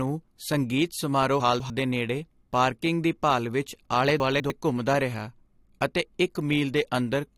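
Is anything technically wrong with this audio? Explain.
Yes. The speech has two jumbled spots caused by chunks out of order: 1.4 to 1.7 s, right after "ਸੰਗੀਤ ਸਮਾਰੋਹ" and before "ਦੇ ਨੇੜੇ ਪਾਰਕਿੰਗ ਦੀ", and 4.2 to 4.5 s, after "ਦੀ ਭਾਲ ਵਿੱਚ ਆਲੇ" and before "ਘੁੰਮਦਾ ਰਿਹਾ ਅਤੇ". In each, a 100 ms piece plays two chunks later than it should, so the sound is reshuffled, with three hard joins. Unlike a dropout or a repeat, nothing is missing or doubled. The same material simply comes out in the wrong order.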